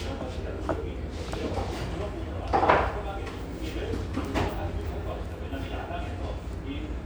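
No technical faults can be heard anywhere in the audio.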